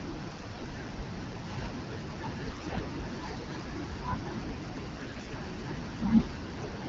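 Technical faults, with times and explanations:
0.29–0.67 s, 2.51–2.81 s and 4.95–5.36 s: AMR bit errors. Flipped low-priority frame bits misplace excitation pulses and skew pitch, gain and spectral values, so the speech turns hoarse and gargly, harsher in the later two bursts. The clean wideband AMR-WB sound between them fits a rate near 12.65 kbit/s.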